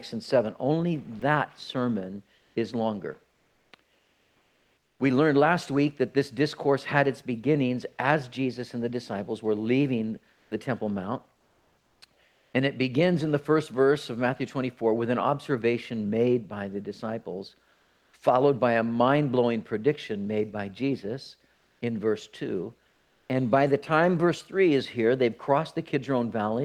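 At 1.19 s there is a brief gap where about 20 ms of sound gives way to flat noise, likely sound dropped by the voice detector, which judged real signal to be background. Unlike a packet-loss glitch, nothing is smeared or repeated. The sound is simply swapped for steady noise.

From 2.35 to 4.99 s, and again at 10.33–10.51 s, 11.37–12.53 s, 17.73–18.13 s, 21.55–21.81 s and 22.89–23.29 s, the background becomes a smooth, featureless hiss. This is likely comfort noise in place of the background, with transmission paused between sounds. It is about 5 dB quieter at 10.33 s, about 2 dB at 17.73 s, and level-matched at 21.55 and 22.89 s, so there the loss of texture, not loudness, gives it away.

At 10.48 s the returning sound starts abruptly, missing about 30 ms of its soft beginning. This is likely an onset clipped by the voice detector, reacting late. Unlike a dropout, the cut falls only at the very start.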